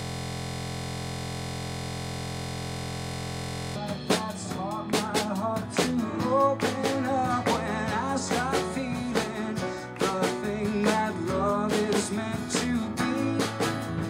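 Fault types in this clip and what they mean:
System hang loop: the system froze while the audio hardware kept replaying one ring buffer. From the very start until 3.76 s, a 23.22 ms slice repeats about 160 times, a steady buzz at 43.1 Hz, which fits a 1024-sample buffer.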